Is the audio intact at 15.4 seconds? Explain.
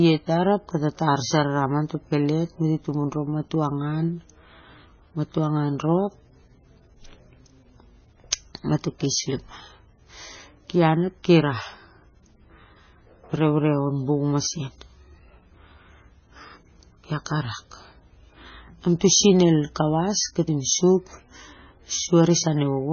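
No. At 15.4 seconds, as through the whole clip, the speech carries heavy damage, likely from MP3 compression at a very low bitrate near 16 kbps. Nothing passes above 6.6 kHz, and weak frequency components flicker in and out between frames, giving a watery, swirling texture with blurred consonant onsets. That flicker sets it apart from a plain low-pass filter, which would only dull the sound.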